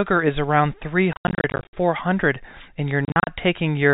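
Speech over a telephone-band path, where nothing sits above 4 kHz on a spectrogram, is broken up by packet loss filled with silence between 1.13 and 1.73 s and again between 3.05 and 3.27 s. The dropouts are scattered, with runs up to 80 ms and 40 ms, which fits 10 ms packets. They show as abrupt flat gaps in the waveform and full-height blank vertical strips on a spectrogram, with hard edges.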